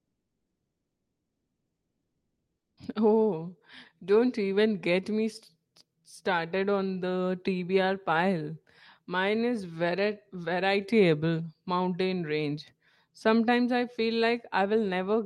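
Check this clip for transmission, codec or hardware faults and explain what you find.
One fault stands out, heard through a call-codec chain whose band tops out near 12 kHz, consistent with Opus at around 32 kbps.

Comfort noise in place of the background, 0 to 2.77 s: the real background is replaced by steady, featureless synthetic hiss about 4 dB quieter, likely from Opus discontinuous transmission.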